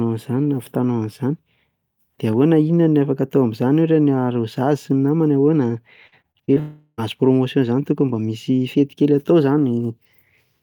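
A speech clip with trouble packed into one second. From 6.07 to 6.58 s there's repeated packet loss (robotic sound): six short gaps, the longest 45 ms, patched by stretching the last sound, so about 29% of that stretch turns choppy. Right after, from 6.60 to 7.00 s, the sound smears into a fading buzz for roughly 0.38 s, then a brief silence, most likely a long network dropout that dropped most of that audio.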